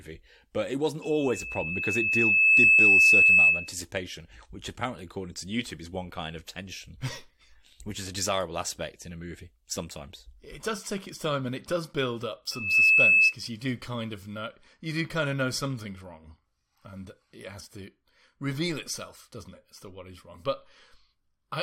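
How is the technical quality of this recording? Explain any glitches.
The recording is marred by loudspeaker feedback squeal, at 1.01 to 3.75 s and 12.51 to 13.35 s. The microphone re-amplifies its own loudspeaker until a 2.6 kHz tone howls well above the speech, swelling over about 1.5 seconds the first time and almost instantly the second. On a spectrogram it shows as a bright horizontal line.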